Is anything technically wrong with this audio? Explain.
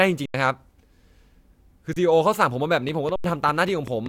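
Yes. This speech clip has two kinds of fault.

An underrun with held sample occurs three times: 0.26 to 0.34 s (85 ms), 1.93 to 1.96 s (31 ms) and 3.16 to 3.24 s (85 ms). The output buffer emptied and the converter held its last value. The waveform sits flat at that level, so the speech drops out without a click at the start. Live audio kept arriving during each gap and was lost, around a tenth of a second in the longer two and about 30 ms in the short one. The speech then resumes further on. The two 85 ms gaps fit a 4096-sample buffer.

A train of clicks runs from 2.89 to 4.07 s. About seven similar clicks come at a steady rate of roughly five per second and peak around 5 dB above the speech. They tick through the speech and the pauses alike, and the last underrun falls inside the train. The likely cause is interference from nearby equipment or a faulty connection or power supply injecting pulses.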